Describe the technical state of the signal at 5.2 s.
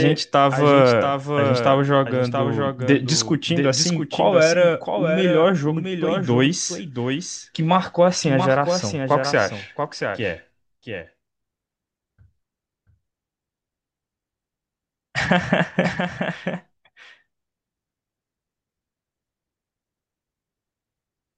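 At 5.2 s the speech is heard twice, a clean copy trailing about 0.7 s behind and somewhat quieter, likely a doubled audio track from a second, slower capture path.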